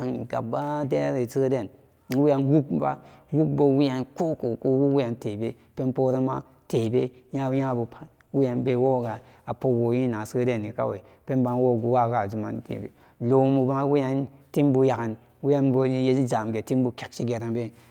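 From 6.76 s to 10.97 s the speech turns rough and watery, losing its crispness and sounding muffled, with the worst stretch lasting about 2.15 s before clarity returns. This is a call bitrate drop: the connection's bandwidth estimate fell, so the Opus encoder was forced to code far more coarsely and trim the high frequencies. The sound points to a fall from around 64 kbps to roughly 17 kbps before recovering.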